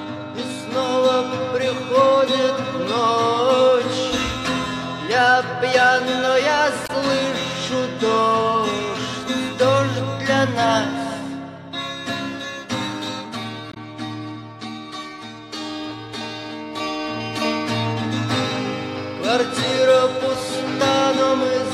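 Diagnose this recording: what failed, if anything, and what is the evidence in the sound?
The codec stage failed here, with damaged data in the compressed stream. There are two brief glitches, at 6.85 to 6.90 s and 13.72 to 13.77 s, each about 56 ms long. Corrupted frames were misread, so the decoder lost sync until it found the next clean frame header.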